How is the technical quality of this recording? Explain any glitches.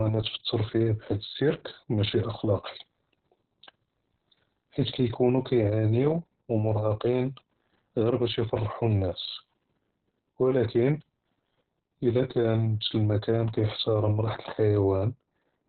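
Poor: heavy Opus voice compression runs throughout the speech. The codec, in its SILK linear-prediction mode, was starved of bits, consistent with roughly 6 kbps, so it cut the band to narrowband, leaving nothing above 4.3 kHz, and coarsely coded the excitation, making speech muffled, hoarse and slightly robotic.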